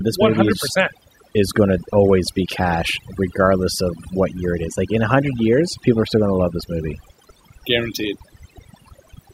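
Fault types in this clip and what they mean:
Overdone noise removal: Noise reduction was pushed too hard across this whole speech recording. Frequency bands near the noise floor get cut almost entirely, taking quiet vocal detail with them. Pauses fall to near silence with glittering specks.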